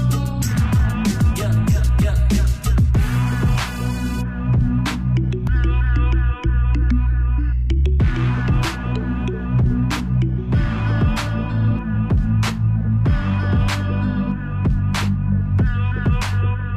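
No technical faults can be heard anywhere in the audio.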